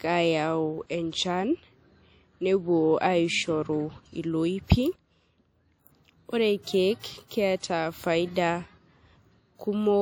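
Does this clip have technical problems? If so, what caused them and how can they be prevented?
Yes. WMA compression runs throughout: the speech rings and sounds washy, with a hiss that rises and falls with the signal and nothing above 19.9 kHz. This likely comes from a transform codec spreading quantisation noise across long blocks, fitting roughly 48 kbps. Encode at a higher bitrate or keep a lossless master.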